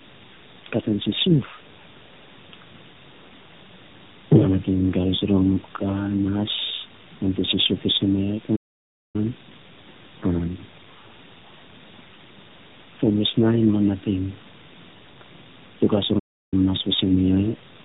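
At 8.56 s, right after "te sisiuf fiisen miya", the speech halts abruptly for about 0.58 s, and again from 16.19 s for about 0.33 s before "nas fiisen miya". These playback stalls, likely the player starving for data, cut to dead silence mid-flow rather than at a natural pause.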